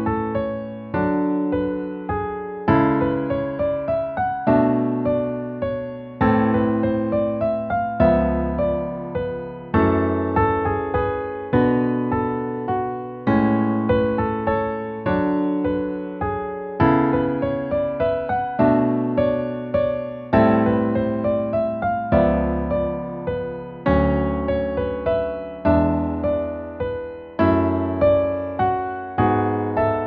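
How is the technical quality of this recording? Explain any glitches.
No glitches or technical faults turn up anywhere in this recording. It holds together steadily, with nothing breaking into the sound at any point.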